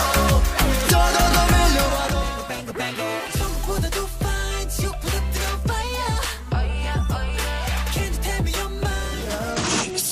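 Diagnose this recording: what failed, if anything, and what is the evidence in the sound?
A Bluetooth SBC bit pool drop sets in at 9.52 s and lasts to the end at 10.11 s, a codec-stage fault on the wireless link. The treble dulls and gritty noise rises, which fits a fall from roughly 31 to 12 in bit pool, near 88 kbps, with upper sub-bands starved and the rest coarsely quantised.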